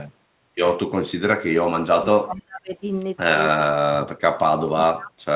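Speech that sinks abruptly at 1.41–1.6 s, again across 1.95–2.73 s, and from 3.64 s to the end, falling by roughly 25 to 35 dB at its deepest. This is likely speech suppressed in double talk, where the echo canceller mistook the talker for loudspeaker echo and turned it down while the far side spoke. Inside the second dip, at 2.36–2.42 s, a very faint delayed copy appears about 0.4 s late and some 35 dB below the speech. It is likely an echo leak from a loudspeaker whose canceller let residue through. Throughout, the audio is band-limited to 4 kHz by the G.711 call path.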